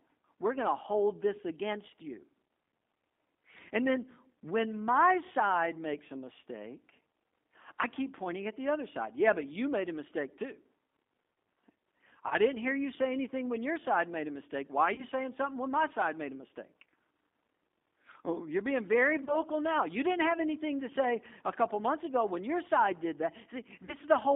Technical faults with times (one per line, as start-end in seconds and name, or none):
0.00-24.35 G.729 codec
12.28-12.37 VoIP packet loss concealed by the speech codec
14.95-15.05 VoIP packet loss concealed by the speech codec
19.24-19.37 VoIP packet loss concealed by the speech codec
23.85-23.94 VoIP packet loss concealed by the speech codec